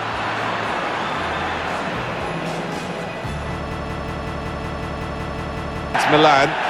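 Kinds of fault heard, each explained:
System hang loop: From 3.72 to 5.94 s the playback stalls while the hardware keeps replaying the same ring buffer, so one 186 ms fragment repeats exactly about 12 times at 5.38 Hz. That length fits an 8192-sample buffer. It sounds like a machine-gun stutter, and about two seconds of audio never arrive. On a waveform, identical blocks tile end to end. A spectrogram shows the same short pattern copied in evenly spaced vertical stripes.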